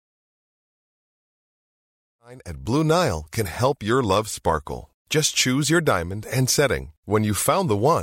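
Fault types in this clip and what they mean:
No faults present; the speech fades in smoothly from about 2 s and reaches full level by 2.87 s, with no click or hard edge.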